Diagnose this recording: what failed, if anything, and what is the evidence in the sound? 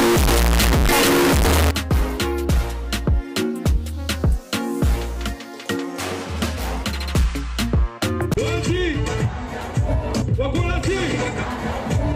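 Sample-format conversion: 0 to 1.71 s is a harsh, near-square waveform at an almost fixed, high level with broadband spectrogram smear, likely 32-bit float read as integer, exponent bits setting level.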